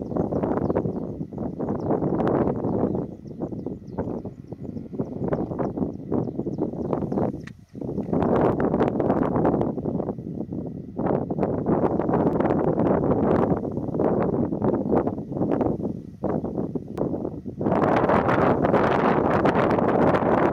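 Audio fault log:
8.52 s, 12.33 s and 16.98 s: damaged data in a compressed stream. At each point corrupted bytes make the decoder misread a frame and lose sync, so a brief chirp or blip cuts through the audio while it hunts for the next valid frame header and resumes.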